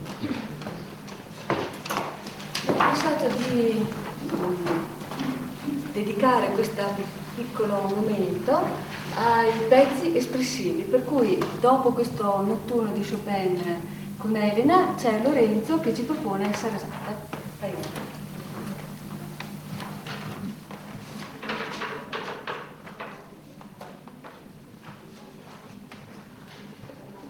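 Nothing stood out as a technical problem anywhere on listening.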